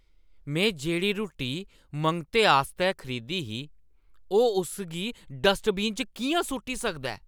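No technical faults can be heard anywhere in the speech recording, which holds steady from the first moment to the last.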